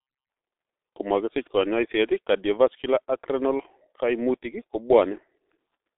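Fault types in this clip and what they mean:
G.723.1 codec: the speech has passed through a low-rate telephony codec that builds each stretch of sound from a coarse vocal-tract model refreshed only every 30 ms, which fits a rate of about 6.3 kbit/s. Damage is heavy: the band sits roughly between 300 Hz and 3.7 kHz with nothing above 3.8 kHz, so the voice is muffled and thin, carries a hoarse, buzzy texture, and consonants smear into neighbouring sounds for the whole clip.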